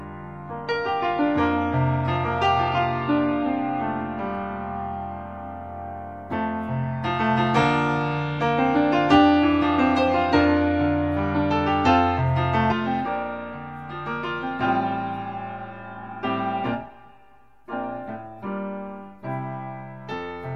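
From 0 to 4.0 s, an adaptive stream starting at a low bitrate sounds thin, with nothing above 11.5 kHz. At 4.0 s it jumps cleanly to fuller quality.

From 12.72 s to the end, channel delay (comb filtering) appears. One channel runs about 5 ms late, notching near 100 Hz upward. The sound turns hollow.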